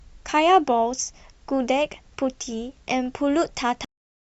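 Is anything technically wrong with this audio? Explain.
Yes, there's a cut-off end. At 3.85 s the speech stops mid-sound and drops straight to digital silence for the last half second or so. The final chunk of audio never got written out, so there's no natural decay, just an abrupt stop.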